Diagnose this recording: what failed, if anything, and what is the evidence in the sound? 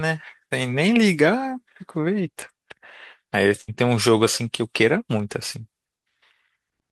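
The network dropped a short burst of packets at about 3.61 s, running to 3.70 s. You can hear the receiver's concealment carry the last bit of speech forward for roughly 60 ms, sustained and fading, rather than giving a clean cut. Then the speech jumps back in, and about 60 ms of what was said is simply missing. That combination of a held, decaying tail and a skip in the speech is the telltale sign of a burst of packet loss, not a local glitch.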